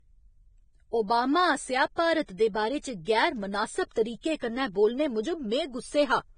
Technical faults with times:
0.00-6.38 low-bitrate audio saved at a high bitrate

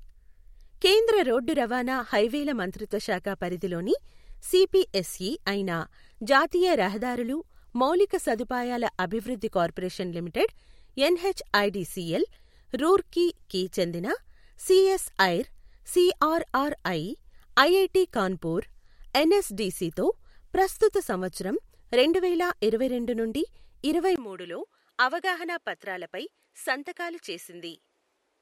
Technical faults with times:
24.16-28.41 input switched to a poorer device

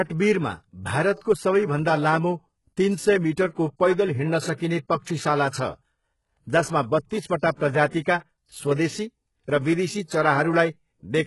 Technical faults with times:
0.00-11.26 HE-AAC compression
4.56-4.60 pre-echo

